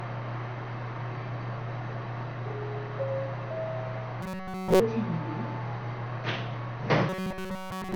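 From the start, the whole recording carries MP2 compression damage, plainly audible: the sound is dull and gurgling, with granular distortion. The likely cause is MPEG Layer II coding at a low rate, around 48 kbps. Upper sub-bands are starved of bits and dropped, and the rest are coarsely quantised. Unlike a plain low-pass filter, the top edge flickers and the surviving content churns.

From 4.22 to 4.80 s, and again from 7.09 s to the end, the sound turns into a rigid metallic buzz at 188 Hz. This is robotic sound from repeated short buffers, likely caused by audio arriving too seldom. A segment of roughly 5.3 ms is looped over and over, so almost nothing new gets through. A dropout would go silent, but here the fixed pitch tone fills the gap.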